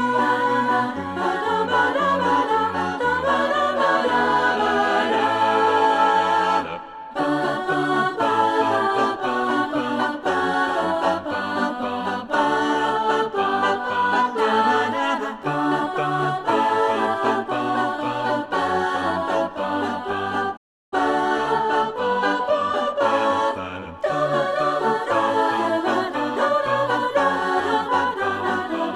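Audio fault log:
20.56 to 20.93 s, playback stall: the sound drops to silence for 350 ms mid-flow, then resumes, likely because the player ran out of buffered data.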